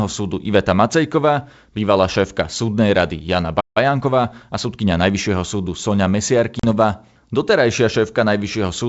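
At 3.60 s the speech cuts out mid-flow and stays silent for about 155 ms, resuming at 3.77 s. This is a playback stall: the sound simply stops rather than fading, which points to the player running dry of buffered data or its output thread being blocked. The likely cause is a delivery hiccup that left nothing to play until the buffer refilled.

From 3.77 s to 5.31 s the speech sounds hurried, running at roughly 1.1 times normal speed without any rise in pitch. This is time-compressed catch-up. Having fallen behind during the stall, the player trims its backlog by discarding tiny slices of audio and cross-fading across the joins. That shortens the material while keeping pitch intact.

At 6.59 s a sharp-edged gap of 40 ms opens, ending at 6.65 s. When the speech returns it comes back with a brief roughness before it settles. This is packet loss on an ADPCM call. A few packets went missing and were filled with silence. 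Because ADPCM codes each sample as a difference from a running prediction with an adaptive step size, the receiver's predictor and step drifted away from the sender's during the hole. The distortion lasts until the two converge again. The G.722 wideband coding at 64 kbit/s underneath shows little or no damage of its own.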